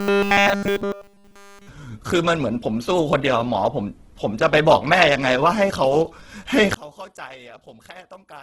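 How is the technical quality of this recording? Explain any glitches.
The technical quality is poor, with three problems.

Throughout, the speech sounds grainy and rough, with nothing above about 12 kHz. This is likely Opus compression in its music (CELT) mode. Heavy damage like this fits a low bitrate around 12 kbps: bands that run short of bits get filled with folded or noisy content.

From 0.01 to 1.69 s the speech becomes a rigid, metallic 200 Hz buzz, robotic sound from repeated short buffers. New audio likely arrived too slowly, so nearly all of it was replaced by a looped fragment. The 200 Hz repeat rate fits a 5 ms buffer.

From 6.74 s to the end, one channel is likely inverted. With one channel's polarity reversed, the shared centre content cancels when the channels are summed to mono. That drops the level by about 24 dB and leaves only a faint residue of the speech.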